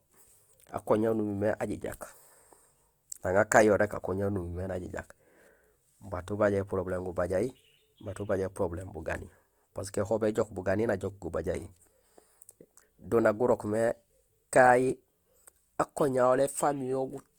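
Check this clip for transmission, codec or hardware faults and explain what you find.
One fault runs through the whole clip: Opus compression, likely in its CELT music mode at a low rate, the grain fitting something near 24 kbps. Short of bits, the encoder preserves each band's energy but fills the detail by copying lower bands or injecting noise. The bandwidth stays fullband, reaching about 20.2 kHz, so the speech isn't muffled; instead it carries a plainly audible rough, grainy, noisy texture.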